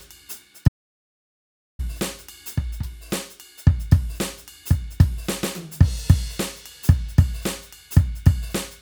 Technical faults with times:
0.68-1.79 audio dropout to silence

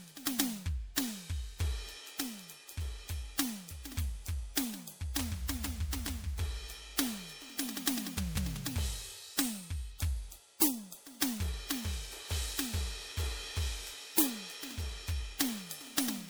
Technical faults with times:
0.00-16.29 generation loss

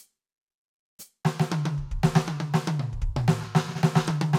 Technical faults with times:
4.08-4.11 DAB burbling

